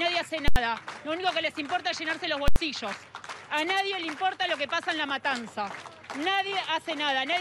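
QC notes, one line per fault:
0.48–0.56 s and 2.48–2.56 s: invalid numbers at full scale. Two very loud bangs, each with nothing audible inside it. A calculation produced infinite or invalid values that were clamped to the extreme sample value, pinning the output flat at one extreme value for 80 ms each time.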